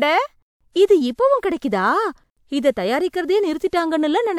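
There are no technical faults to describe in this speech recording.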